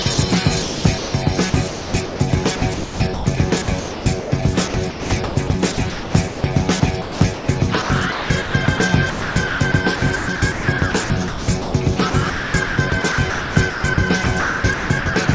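From 0.02 s to 15.28 s the sound keeps breaking up. Stretches drop out and are filled with a flat, steady hiss, adding up to roughly 6.1 s of the clip. This choppiness is likely sound chopped by the voice detector: the sender repeatedly stopped transmitting and the receiver filled the gaps with generated comfort noise. Throughout, nothing is heard above 8 kHz, which fits a G.722 call codec.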